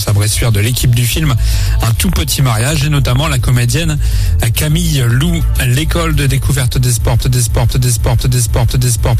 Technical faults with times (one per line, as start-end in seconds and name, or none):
1.91-3.17 train of clicks
7.22-9.20 broken-record loop